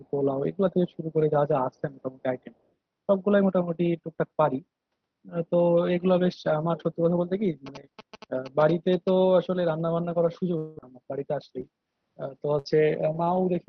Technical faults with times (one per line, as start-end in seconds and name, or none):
7.66-9.10 GSM signalling bursts
10.57-13.36 repeated packet loss (robotic sound)